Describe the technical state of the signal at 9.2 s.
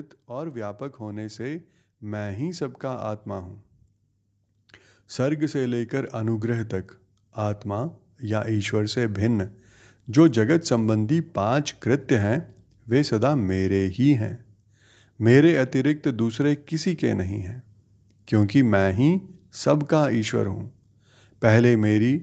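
At 9.2 s the automatic gain is rising, from 7.63 to 9.44 s. The gain control judged the input too quiet, so speech and background swell together by about 3 dB.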